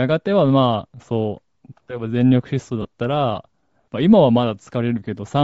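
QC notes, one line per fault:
throughout: Bluetooth LC3 compression, likely the cause of the plainly audible codec damage on the speech. Much of the upper spectrum is dropped and replaced with filled-in noise, giving a breathy, grainy edge. The damage fits 7.5 ms transform frames at roughly 32 kbps.
2.82 to 2.85 s: lost LE Audio frames, a 30 ms gap where the decoder lacked real data and rebuilt the sound by reusing the last spectrum with scrambled signs. That turns tonal parts into a brief noisy smear. The length fits about four 7.5 ms frames.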